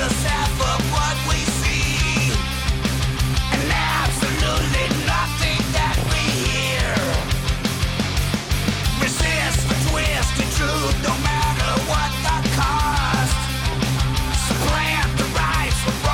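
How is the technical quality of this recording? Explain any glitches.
The recording is marred by four bursts of DAB burbling, at 3.96 to 4.95 s, 5.97 to 6.34 s, 9.13 to 10.08 s and 13.62 to 13.91 s. Weak reception lets bit errors slip past error correction, so wrong samples put short blips of noise in single sub-bands, and wrong scale factors make sub-bands jump in level for up to a frame. Unlike dropouts, burbling does not silence the audio.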